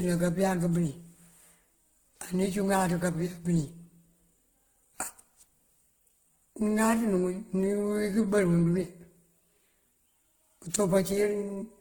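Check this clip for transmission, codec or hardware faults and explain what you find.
One fault runs through the whole speech clip: transcoding between lossy codecs. A fine, swishy smear is heard together with a coarser, low-rate graininess, with content reaching up to about 20.1 kHz. It sounds like the likely result of WMA at around 96 kbit/s re-encoded to Opus at around 16 kbit/s, with Opus spending its few bits on WMA's debris.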